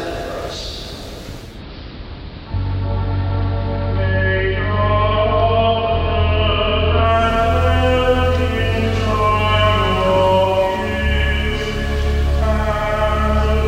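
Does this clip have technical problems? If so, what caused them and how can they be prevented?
Yes: from 1.38 s to 7.27 s, digital radio blending to analogue cross-fades over about 258 ms into AM, adding faint hiss at unchanged level. Better antenna placement or reception keeps the digital signal locked, preventing the blend.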